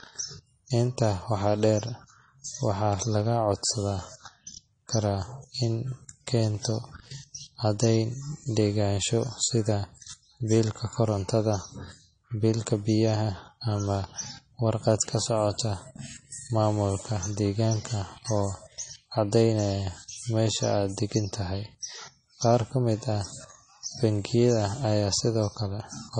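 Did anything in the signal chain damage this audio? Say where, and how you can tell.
Yes, at the codec stage, and it affects the whole speech clip. Nothing is present above about 9.8 kHz, a hard ceiling that holds from start to finish, and the artefacts of the earlier low-bitrate MP3 encode remain. That pattern fits low-bitrate audio saved at a high bitrate, likely a pass near 32 kbit/s later re-encoded to MP3 at 320 kbit/s. The second encode cannot restore what the first discarded.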